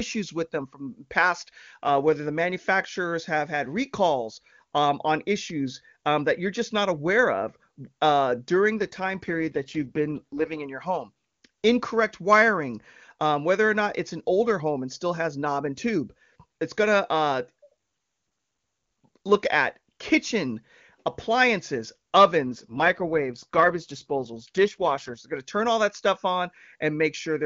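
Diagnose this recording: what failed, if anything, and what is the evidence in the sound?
Twice the speech turns rough and synthetic, with no gap and no narrowing of the band: from 8.78 to 10.63 s, after "aware of uh during", and from 22.44 to 25.18 s, after "look at kitchen appliances". This is an AMR rate drop at the network stage. A weak radio link pushed the AMR-WB codec to spend bits on error protection, which fits a fall from 23.85 to about 8.85 kbit/s.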